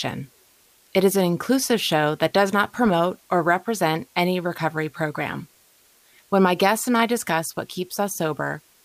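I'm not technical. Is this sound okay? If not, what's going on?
No. A steady, even hiss sits under the speech from start to finish. This is low bit depth with dither: the audio, likely stored with only around 9 bits, turns its rounding errors into constant noise.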